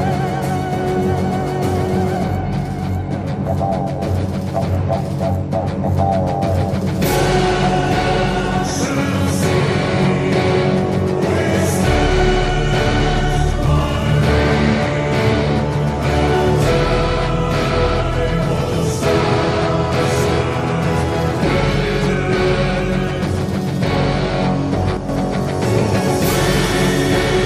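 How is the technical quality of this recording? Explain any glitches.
There is one glitch, near the end. From 24.97 to 25.09 s, a sudden gain jump drops the sound and its background noise together by about 7 dB. A digital gain step applied without a ramp is the likely cause.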